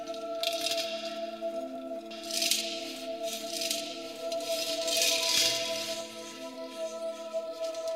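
A second, late copy of the signal has been mixed into this music clip, most likely because the audio was captured again through a slower path or an edit left two copies out of step. From 2.11 s to 6.01 s a doubled audio track plays about a second behind the original, roughly 5 dB quieter, full-band and dry with no decay or room colour, so everything is heard twice. The copy cuts in and out abruptly at those times.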